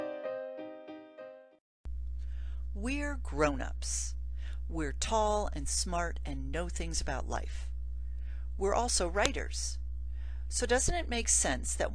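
There's a sharp click at 9.26 s: a file header played as audio, where a joined WAV piece kept its header bytes and they got played as samples.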